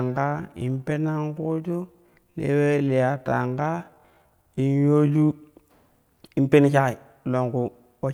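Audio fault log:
0.00–5.28 s, time-stretched section: speech runs at about 0.62 times normal pace, dragging from repeated short pieces. Pitch holds steady, unlike slowed playback, which would drop it. Likely software stretching to fit a length. Pace snaps back at 5.28 s.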